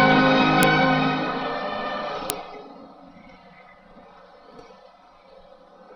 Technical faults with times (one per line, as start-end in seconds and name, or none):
0.63 file header played as audio
2.30 file header played as audio